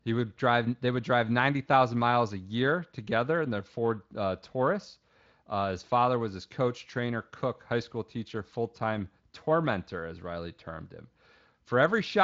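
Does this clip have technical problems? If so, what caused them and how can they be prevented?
No, nothing stood out as a technical problem on listening to this speech clip, so there is nothing here that needs preventing.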